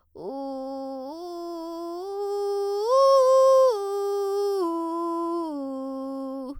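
Listening to this music, nothing stood out as a technical problem at any point.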